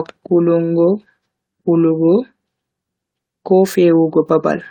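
No technical faults can be heard anywhere in the recording; the signal stays continuous and steady throughout.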